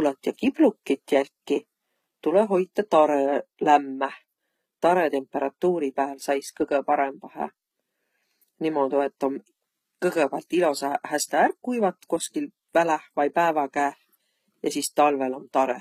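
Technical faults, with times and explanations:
Throughout, HE-AAC compression: the treble sounds bright but synthetic, with gritty, lispy s sounds. The likely cause is spectral band replication rebuilding the top band from copied lower bands, so harmonics misalign above the crossover. The damage fits a bitrate near 20 kbps.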